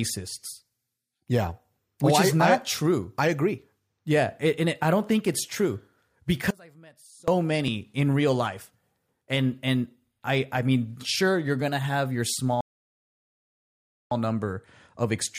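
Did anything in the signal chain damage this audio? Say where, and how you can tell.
Yes. Around 6.51 s the speech drops out for about 0.77 s, to 7.28 s, leaving only a faint residue about 25 dB below normal. This is an audio dropout to a faint residue. The path stayed live, so the likely cause is a momentary break in the analogue wiring or connection.

At 12.36 s, right after "you're gonna have your", there is a small jump in the speech. This is a dropped buffer (overrun) at the driver or buffer stage. A read likely fell behind the hardware, so roughly 10 ms was overwritten and skipped rather than silenced.

From 12.61 s to 14.11 s, still just after "you're gonna have your", playback stops in silence and then resumes exactly where it left off. This is a rebuffering stall at the network and playback stage. The player ran dry, losing nothing but adding about 1.5 s.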